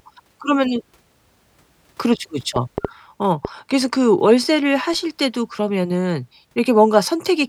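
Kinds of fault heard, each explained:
Train of clicks: between 2.56 and 3.46 s, a short run of about four sharp, near-identical pulses ticks over the speech at roughly 3.4 per second, spaced unevenly, each standing well above the voice, perhaps 15 dB louder. The likely cause is electrical interference or a faulty connection or power supply injecting pulses. Unlike a single isolated click or the crackle of clipping, these repeat with a consistent shape for a stretch and sit on top of the sound rather than distorting it.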